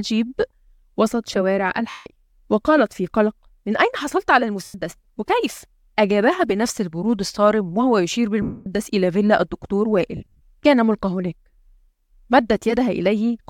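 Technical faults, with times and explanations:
1.90–2.06 s, 4.64–4.74 s, 8.42–8.66 s: lost LE Audio frames. Gaps of 160, 100 and 240 ms are filled with a hissy smear of the preceding sound that fades away, rather than clean silence. This fits LC3 concealment, which reuses the last spectrum with random signs.
10.17–10.41 s: lost LE Audio frames. Short losses, the longest about 50 ms, are scattered over 240 ms. They give a string of brief noisy smears instead of one fading smear.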